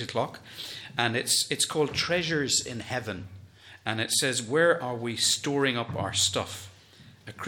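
No technical faults can be heard at any point in the audio.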